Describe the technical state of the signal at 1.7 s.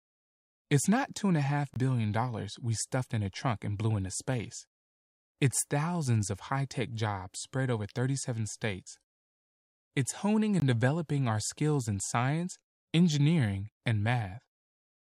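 At 1.74 to 1.76 s there is a block of digital silence: the signal drops to zeros for 20 ms and returns abruptly, heard as a brief hole. On the waveform it is a flat line; the spectrogram shows a blank gap.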